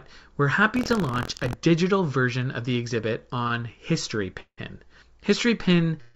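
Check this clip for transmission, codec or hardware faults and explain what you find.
The speech carries three kinds of fault: buffer tearing, two short stalls from late packets, and two call audio freezes, all heard through a band that stops at 7 kHz.

From 0.74 to 1.55 s, just before "version of the exhibit", buffer tearing puts a rattling buzz near 43.1 Hz on the voice, which fits a 1024-sample buffer. Writer and reader have slipped, so a small slice of each buffer replays audio about 70 ms stale, with hard joins. Unlike a stall, the buzz persists and follows the signal.

Right after "version of the exhibit", two short stalls from late packets follow back to back: 3.44 to 3.48 s (17 ms) and 3.48 to 3.52 s (25 ms). The jitter buffer briefly emptied, so the last sound was stretched and then resumed without loss. Each is a brief smeared hold, far shorter than a freeze and without fading into silence.

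Two call audio freezes occur at 4.40 to 4.60 s (172 ms, the last 80 ms silent) and at 6.01 s, running to the end for 136 ms. The likely cause is packets held up in transit that drained the jitter buffer. The final sound continues as a decaying buzz until playback resumes from the same point. The long fade distinguishes these from the short stalls.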